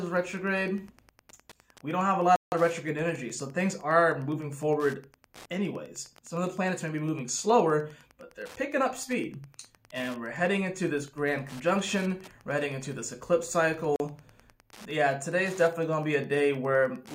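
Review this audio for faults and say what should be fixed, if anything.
Wi-Fi interference runs through the whole clip as a faint ticking, roughly 30 dB below the signal, repeating every 102.4 ms, or just under ten times a second. A nearby Wi-Fi radio's beacon bursts are being picked up and rectified by the audio circuitry. The strict 102.4 ms spacing is what separates this from mains buzz or digital clicks, which follow other rhythms. Keep Wi-Fi radios away from the audio chain and use shielded cables.

A block of digital silence occurs twice: from 2.36 to 2.52 s, a 160 ms hole, and from 13.96 to 14.00 s, a shorter 40 ms gap. In each, the sound drops straight to silence and returns with no fade. This points to the output buffer not being filled in time. Unlike a dropout in an analogue line, there is no residual noise inside the gap. Give the audio process larger buffers or higher scheduling priority so it never misses its deadline.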